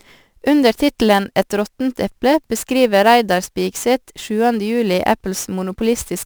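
Sample clock jitter runs throughout: the converter clock wanders by around ten microseconds, so samples land early or late and steep waveform slopes pick up errors about 20 dB below the speech. It sounds like a hissy roughness on loud, bright syllables that vanishes in pauses.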